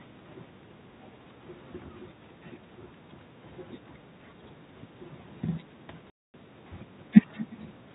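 From the first second to the end, every phrase is trailed by a faint, hollow repeat about 20 dB below the speech and arriving roughly four tenths of a second later. That is echo with no canceller: at the far end the call is playing through a loudspeaker, the microphone there picks it up, and nothing subtracts it. The talker's own speech makes the round trip through the network and returns as a thin copy.

At 6.1 s the speech cuts abruptly to dead silence, and it resumes at 6.34 s. Both edges are hard. This is packet loss filled with silence. About 240 ms of audio never arrived, a gap that fits a run of twelve 20 ms packets. The receiver played nothing in their place, leaving a clean-edged hole. The whole clip has the narrow, telephone-limited sound of G.711 coding, with nothing above 4 kHz.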